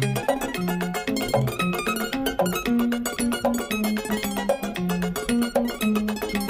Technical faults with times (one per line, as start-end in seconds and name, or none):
0.00-6.49 audio read two samples at a time (double speed)